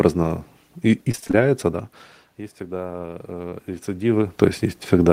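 A speech recording whose sound turns choppy and robotic from 1.11 to 1.35 s, just before "да есть". This is repeated packet loss: six gaps, the longest 24 ms, about 120 ms in all, each patched by extending the previous sound. After "да есть", from 2.58 to 4.15 s, level and room noise swell together by about 4 dB. This is automatic gain rising, responding to input that fell about 17 dB as the talker moved away. A brief smear at 3.49 to 3.53 s is a short concealed packet loss, where 20 ms of missing audio was filled by continuing the last sound.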